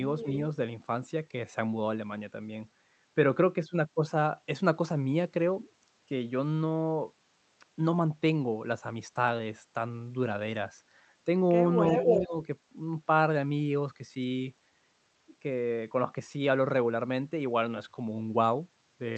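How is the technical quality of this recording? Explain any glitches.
Two glitches stand out, both from echo handling on the far end of a call. They sit on a call path whose spectrum stops near 8 kHz, which points to Opus at a moderate bitrate.

Echo leak, at 0.18–0.29 s and again at 11.87–12.22 s: a delayed copy of the speech comes back about a third of a second late (326 ms, then 336 ms). The likely cause is a loudspeaker-side echo canceller that let part of its microphone pickup through, so it was sent back into the call. The first echo is faint, roughly 15 dB below the speech. The second is slightly louder than the speech itself and clearly audible. On a spectrogram each one shows as a repeat of the same harmonic pattern shifted right by about 0.33 s. In the waveform it appears as an extra burst trailing the original.

Speech suppressed in double talk, at 12.23–12.35 s, immediately after the loud echo: the speech level drops by up to about 15 dB over roughly 100 ms. 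The likely cause is a canceller that could not tell its own talker from the returning echo and turned both down. In the waveform it looks like a brief pinch in the envelope. On a spectrogram it shows as a short, faded vertical band.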